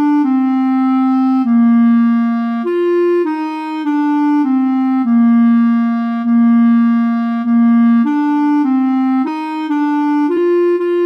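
At 9.26 s the sound jumps ahead by about 150 ms. At 10.36 s it jumps again, by about 100 ms. These are compressed frames skipped: whole compressed blocks, which fit frames of 26.1 ms, never play.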